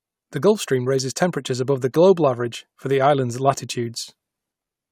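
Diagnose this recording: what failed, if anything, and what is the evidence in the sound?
No fault found.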